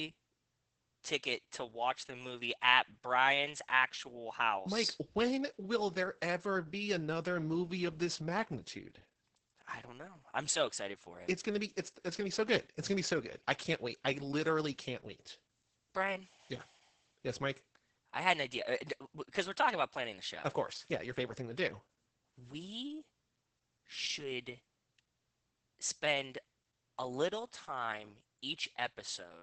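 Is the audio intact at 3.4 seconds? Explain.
No. At 3.4 s, as throughout the speech, Opus voice compression in SILK mode leaves the audio muffled, hoarse and slightly robotic. The coarsely coded excitation fits roughly 10 kbps. A spectrogram shows nothing above 8.7 kHz and blurred, smeared harmonics below.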